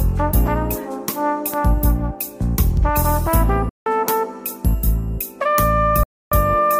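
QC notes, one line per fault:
1.54–1.80 s, loud pop: two sharp pops a few dB above the sound, which continues underneath; likely a voltage step from a switch, plug, static or driver glitch.
3.69–3.86 s and 6.03–6.32 s, Bluetooth dropout: output goes silent for 168 ms and 280 ms, then resumes further on; likely late wireless packets being discarded.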